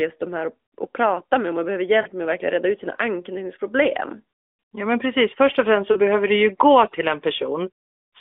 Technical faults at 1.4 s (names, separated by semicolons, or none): none